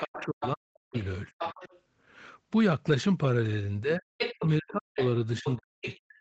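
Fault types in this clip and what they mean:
Other side's voice leaking through: A second voice can be heard under the talker, about 10 dB quieter, from the start to 1.8 s and again from 4.18 to 5.96 s. It is most likely the far end playing from a loudspeaker and reaching the microphone. The echo canceller did not remove it fully. So the remote talker rides along in the send path.
Speech suppressed in double talk: The talker's own voice dips sharply while the leaked voice is present. This happens from 0.01 to 1.57 s, where about a second in total is affected, and again from 3.82 s to the end. At its deepest the drop reaches around 40 dB, so parts nearly vanish. The likely cause is an echo canceller that could not tell near and far speech apart. It turned both down together.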